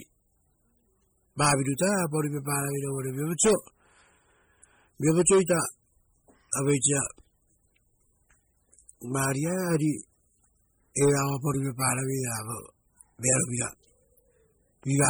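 Throughout the speech, the sound is watery and swirling. Heavy MP3 compression is the likely cause. Short of bits, the encoder drops weak frequency lines, which flicker on and off between frames. S sounds chirp metallically. Attacks smear. This fits roughly 32 kbps.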